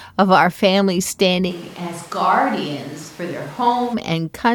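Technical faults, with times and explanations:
1.51–3.93 s, switch to a distant microphone: right after "of our family" the speech suddenly turns roomy and hollow, loses bass, drops about 10 dB and gains room noise roughly 20 dB below the speech, then snaps back. The likely cause is the close microphone's signal being replaced by a farther one. Unlike added reverb, the level and noise floor shift together at both edges.
1.63–1.69 s and 3.02–3.08 s, frames out of order: each stretch plays two neighbouring single frames in swapped order, which fits coded frames of about 23 ms, giving a brief garbled flutter. Unlike a dropout or stutter, nothing is missing or repeated and no time is lost.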